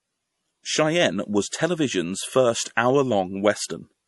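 MP3 compression, throughout: nothing sounds above 11.5 kHz, and the speech turns watery and swirly, likely from an MP3 encoder near 48 kbps zeroing weak frequency lines.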